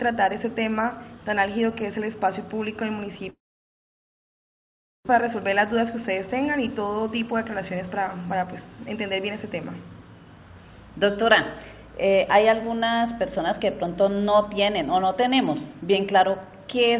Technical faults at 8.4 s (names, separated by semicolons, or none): jitter buffer speed-up